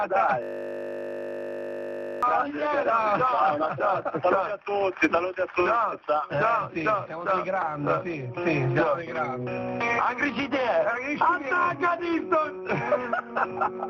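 From 0.43 to 2.23 s the sound collapses into a steady 50 Hz buzz, a system hang loop: the machine or driver froze while the hardware kept replaying one 20 ms slice of its ring buffer, repeating it 90 times before playback resumed.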